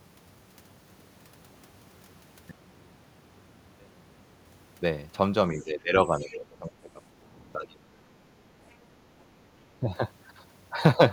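From 2.51 to 4.45 s the speech nearly vanishes, falling about 36 dB to a faint residue, likely because one channel inverted cancels the centred voice when the stereo is summed to mono.

Between 5.52 and 7.03 s the speech dips by roughly 15 dB, about a second in all. This is likely speech suppressed in double talk, with the echo canceller turning the talker down while the other side spoke. Within that stretch, from 6.26 to 6.37 s, a second voice briefly surfaces about 20 dB below the speech, likely the other side's voice leaking through from the loudspeaker because the canceller left it in the microphone signal.

The same suppression returns from 7.54 to 8.47 s, cutting deeper at around 25 dB for roughly 0.7 s, and again briefly at 9.80 to 9.89 s with a dip of about 15 dB.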